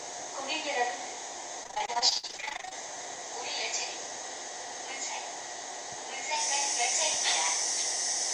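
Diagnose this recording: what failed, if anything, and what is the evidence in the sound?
The network stage failed, with repeated packet loss causing a robotic sound from 1.63 to 2.74 s. The audio turns choppy, with gaps up to 54 ms. Each hole is patched by extending the previous sound, covering about 41% of the stretch.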